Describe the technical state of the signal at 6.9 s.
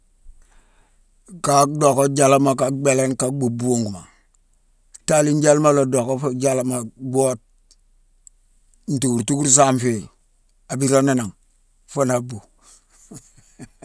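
At 6.9 s the speech signal is intact, with no audible fault at that moment.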